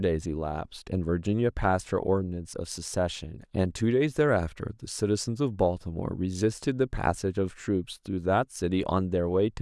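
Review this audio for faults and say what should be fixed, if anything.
No faults; nothing to fix.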